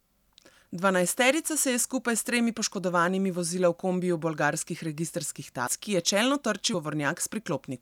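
Speech with compressed frames skipped at 5.66 s, after "v kombiju bolgarskih registrskih", and at 6.73 s, after "ki je čelno". The audio jumps ahead by roughly 200 ms and 150 ms, fitting about ten and seven 26.1 ms frames. Unlike a dropout, there is no silent gap.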